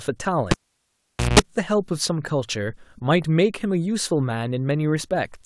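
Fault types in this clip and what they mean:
Cable pulled and plugged in: A live cable is pulled out and pushed back in while the speech plays. At 0.51 s a pop cuts the sound. Near silence follows for about 0.83 s. Near the end of that gap, a 60 Hz mains buzz lasts about 0.18 s. Only the plug tip is touching then, so it picks up hum. A second pop at 1.39 s marks the full reconnection.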